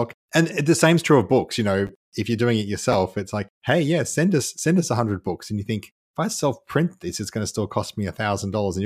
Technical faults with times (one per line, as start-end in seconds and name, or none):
1.87 chunks out of order
2.92-2.94 chunks out of order